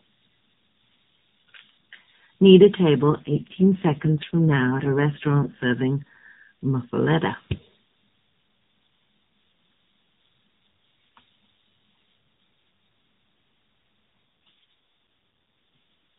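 From 3.00 to 5.65 s and again from 14.46 to 14.73 s, an AMR rate drop makes the speech buzzier and more synthetic, which fits a switch from 12.2 to 4.75 kbps. The spectrogram keeps its 4 kHz ceiling and the waveform shows no gap.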